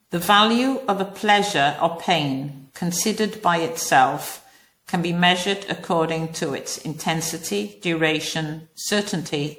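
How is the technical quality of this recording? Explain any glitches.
The quality's degraded all the way through: the speech sounds swirly, smeared and hollow, with soft attacks. That's most likely generation loss, MP3 re-encoded around ten times, consistent with 96 kbit/s, with each pass stacking fresh quantisation damage.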